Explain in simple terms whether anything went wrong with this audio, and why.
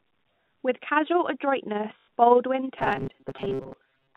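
Several things went wrong.

Throughout the speech there is overlap-add ripple: the level pulses quickly, roughly twenty times a second, giving a fluttery, shaky tremolo. Unlike the stutters below, it never stops and never repeats any sound. The loudness just wobbles steadily from start to finish.

From 1.98 to 2.08 s there is packet loss with the last packet repeated. About 100 ms of audio went missing, which fits five 20 ms packets, and the last piece was replayed to fill the gap. It is one brief, buzzing stutter rather than a lasting change.

From 2.79 s to the end, the speech turns into a rigid, metallic buzz pitched at 134 Hz, while still loosely following the speech. This is robotic sound from repeated short buffers, likely caused by a tiny chunk of sound of about 7.5 ms being replayed over and over, with about half the real audio skipped. It differs from the packet stutter because it lasts much longer and has a fixed, higher buzz.

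The narrow, telephone-like tone comes from ordinary phone-line coding and is expected here.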